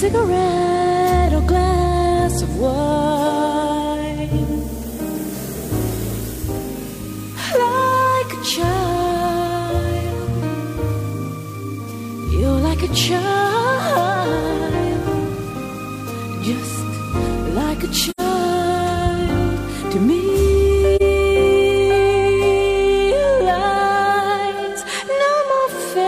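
AAC frame loss with muting at 18.10–18.20 s and 20.96–21.02 s: zeroed frames leave soft-faded gaps, about 85 ms then 43 ms, fitting two frames then one.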